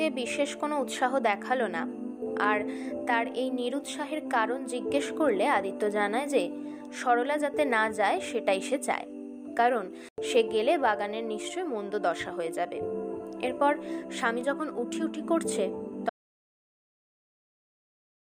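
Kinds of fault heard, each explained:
Bluetooth dropout: A sudden 93 ms hole of silence at 10.09 s, the sound resuming as if it had played on, likely from wireless packets arriving too late.
Audio dropout to silence: From 16.1 s to the end the sound cuts to silence with no room tone, likely a lost input leaving the recorder writing silence.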